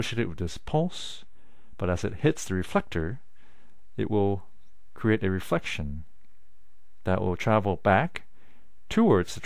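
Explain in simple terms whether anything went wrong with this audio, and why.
Listening to this audio, nothing stood out as having gone wrong.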